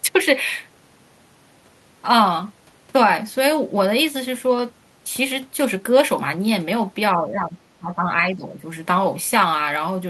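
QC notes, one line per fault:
7.13–7.56 s and 7.79–8.61 s, speech suppressed in double talk: the speech sinks twice in quick succession, by roughly 10 dB over the first stretch and roughly 15 dB over the second, which loses level for most of its length. The likely cause is an echo canceller that heard both ends talking at once, could not tell this talker from its own loudspeaker echo, and pulled everything down together.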